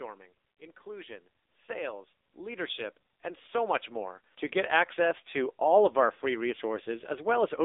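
From start to finish the speech has passed through the AMR narrowband mobile codec, which rebuilds each 20 ms frame from a vocal-tract model fed with sparse pulses. The band runs from about 300 Hz to 3.7 kHz, with nothing above 3.8 kHz, and the heavy buzzy, synthetic coarseness points to a low rate around 6.7 kbps.

From 0.58 s to 5.01 s, automatic gain rising sets in: the gain control judged the input too quiet and kept turning it up, by about 13 dB overall. Speech and background swell together steadily across those four and a half seconds.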